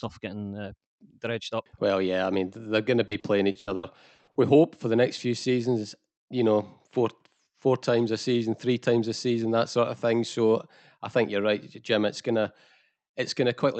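Repeated packet loss from 3.07 to 4.38 s: eight dropouts, up to 80 ms each, are patched by stretching prior sound, leaving choppy speech with pieces missing.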